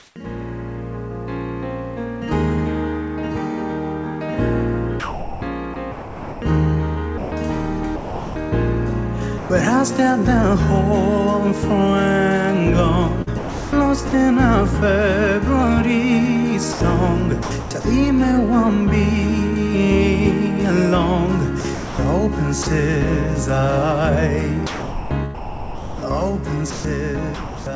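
From 0.00 to 0.16 s the opening background is a steady, featureless hiss rather than a real room: comfort noise in place of the background, likely from the sender's discontinuous transmission sending nothing while its detector judged the input silent. The synthetic fill sits about 5 dB below the real background, which lies about 44 dB under the loud parts. Unlike a dropout to silence, a faint noise floor remains; it is simply too smooth and too quiet.

Inside that stretch, from 0.10 to 0.16 s, the onset is clipped by the voice detector. About 60 ms of the beginning never arrived, likely because the detector reacted late, so the sound starts abruptly with no soft attack, straight out of the synthetic hiss. What separates this from chopping is that the cut happens once, at the front edge only.

Sound is chopped by the voice detector from 5.00 to 8.36 s (about 1.5 s replaced in total), 13.22 to 14.13 s (about 0.43 s), 16.73 to 17.85 s (0.30 s), 21.61 to 22.67 s (0.32 s) and 24.67 to 27.66 s (about 1.6 s). 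The detector likely flipped between sending and muting several times in each window, so quiet portions and edges vanish into brief fills. The repeated switching within one stretch is what marks it as chopping.

At 9.38 to 9.50 s the sound is dropped by the voice detector: 120 ms is gone, likely because the detector mistook a quiet passage for background, and steady comfort noise stands in until the sound returns. It is one clean gap, neither an onset clip nor a flicker.

Throughout, nothing is heard above 8 kHz, which fits a wideband call codec such as G.722 at 64 kbps.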